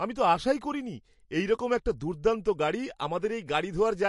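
Throughout the speech, the sound is watery and swirly, sibilants carry metallic chirps, and nothing reaches above 11.3 kHz. The likely cause is MP3 compression at a low bitrate, plausibly around 48 kbps, where the encoder cuts the treble and lets weak frequency lines flicker between frames.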